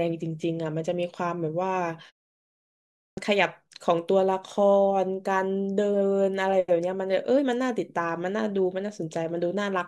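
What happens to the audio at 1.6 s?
Nothing goes wrong at 1.6 s: the speech carries on intact there, with no dropout, click or distortion.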